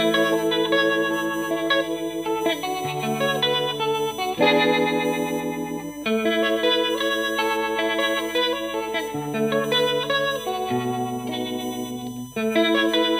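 A USB whine runs through the whole clip: a fixed-pitch tone at 1 kHz with harmonics, strongest at 21 kHz, sitting around 20 dB below the signal. The bus's 1 ms frame current is leaking into the audio through power or ground.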